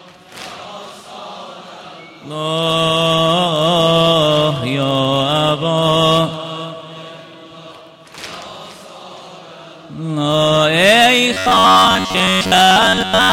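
Audio arrives at the playback buffer too seldom, so the software likely fills the gaps by looping the last 10.7 ms of audio, and most of the real signal is skipped. From 11.34 s to the end at 13.33 s, this robotic sound from repeated short buffers becomes a rigid metallic buzz fixed at 93.8 Hz.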